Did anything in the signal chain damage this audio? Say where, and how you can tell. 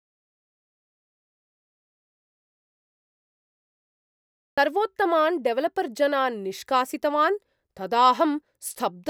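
Yes: there's an audio dropout to silence right from the top, running to about 4.6 s, where the speech comes in mid-flow. The gap is silent, no room tone at all, so the input was likely lost upstream (disconnected device or link) while the recorder kept writing.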